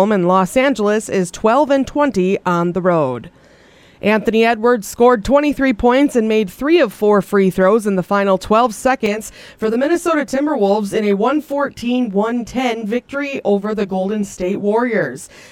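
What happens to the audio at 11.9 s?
At 11.9 s you're in the middle of a stretch of channel delay (comb filtering) that starts around 9.06 s and runs to the end of the clip. One channel lags the other by roughly 20 ms, and when the two get folded to mono, the content they share cancels at evenly spaced frequencies, with the first notch down around 30 Hz. With a delay that long, the sound comes across as rough and slightly doubled.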